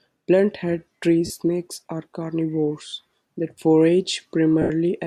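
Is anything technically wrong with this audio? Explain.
Yes. The speech has three short dropouts from lost LE Audio frames, at 1.26–1.30 s, 2.88–2.93 s and 4.62–4.70 s, lasting 40, 50 and 80 ms. Those gaps fit runs of 10 ms LC3 frames going missing over the Bluetooth link. In each gap the decoder conceals the loss by repeating the last good spectrum with randomised signs, so voiced sound smears into a noisy hiss. In the 80 ms gap the concealment fades, and the sound dies away toward silence before it resumes.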